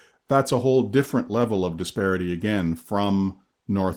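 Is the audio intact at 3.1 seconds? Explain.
No. At 3.1 seconds, as throughout the clip, the speech carries plainly audible coding damage from Opus voice compression. At about 16 kbps the hybrid mode codes low frequencies with SILK and the band above 8 kHz with CELT, both coarsely, in 20 ms frames.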